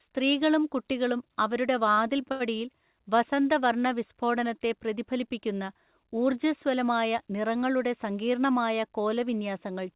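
At 2.32 s a short stall from a late packet holds the sound for about 80 ms until 2.42 s, a slight buzzy stretch through the 4 kHz narrowband call path. Unlike a dropout, nothing is lost, and everything afterwards simply runs about 80 ms later.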